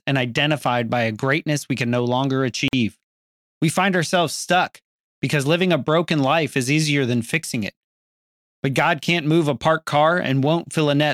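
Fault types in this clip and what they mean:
Gap at a join of encoded pieces: speech stops at 2.68 s and resumes at 2.73 s, leaving a 48.5 ms hole of silence where two separately encoded pieces were joined without trimming the encoder's start delay and end padding. Unlike a packet-loss dropout, nothing is missing: the speech picks up exactly where it broke off. The edges are smeared by the codec, not the hard digital click of a raw splice.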